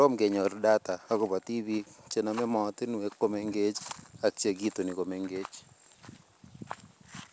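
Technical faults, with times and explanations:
Nothing stood out on listening to this speech, which comes through a G.722 call path that carries nothing above 8 kHz.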